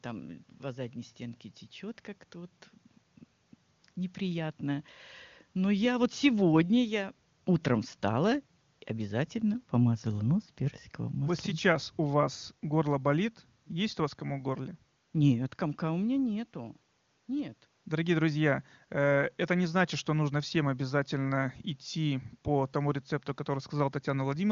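Nothing stood out on listening to this speech clip, which comes through a wideband AMR-WB (HD Voice) codec path at a high rate.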